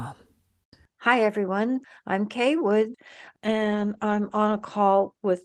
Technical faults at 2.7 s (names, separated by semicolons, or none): none